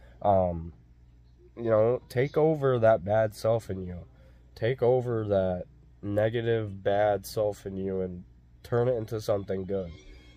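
Listening closely turned up nothing that stood out as a technical problem at any point.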